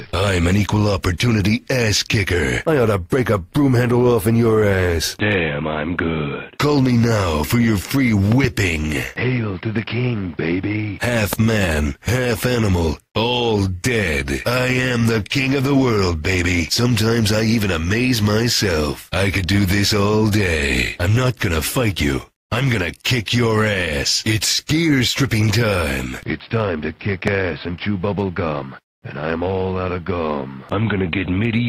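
Sharp loud pops jump about 10 to 15 dB above the audio, a double pop at 8.32 to 8.47 s and single ones at 11.33 to 11.35 s and 27.28 to 27.30 s, likely from plug, switch or static voltage spikes.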